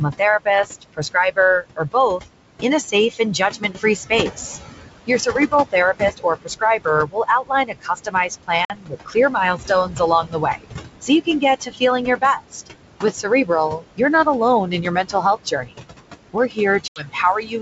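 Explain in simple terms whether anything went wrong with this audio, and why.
Noise suppressor artifacts run through the whole clip. A noise suppressor turns the room noise down between words and lets it back up under them.

There are also several stretches of speech cut by the noise suppressor, at 0.18 to 2.21, 2.62 to 4.38, 5.07 to 12.68, 13.0 to 14.27, 14.66 to 15.92 and 16.33 to 17.61 seconds. The suppressor mistook quiet parts of the speech for noise, so they sound swallowed.

Packet loss on an ADPCM call causes two abrupt gaps, a 50 ms hole at 8.65 seconds and an 80 ms hole at 16.88 seconds. Afterwards the decoder needs a moment to fall back in step.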